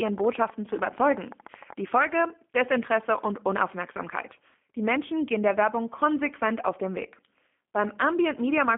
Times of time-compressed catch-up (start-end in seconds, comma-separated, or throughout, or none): none